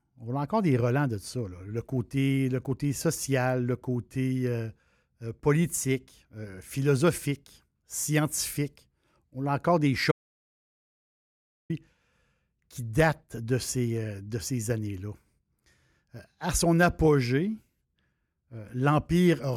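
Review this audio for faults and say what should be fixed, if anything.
At 10.12 s, right after "a encore des", the speech cuts off mid-flow into silence with no room tone until 11.70 s, losing about 1.58 s. This audio dropout to silence likely came from the input dropping while the recorder kept writing silence. Secure cables and connections, and monitor input levels during recording.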